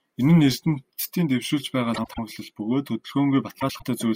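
Frames out of order at 1.94–2.19 s and 3.60–3.83 s: two adjacent blocks of about 96 ms, which fits runs of four frames each, play swapped. The result is a garbled flutter, and no time is lost.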